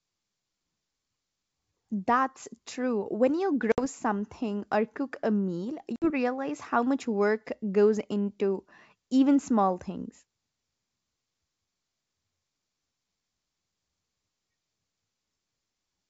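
A speech clip carried over G.722 wideband coding, with packet loss on an ADPCM call at 3.72 to 3.79 s and again at 5.96 to 6.11 s. Each time, roughly 60 ms of audio, a few packets, drops out to a hard-edged silence. The decoder's predictor and step size lose track of the sender's, so the speech comes back slightly distorted before settling.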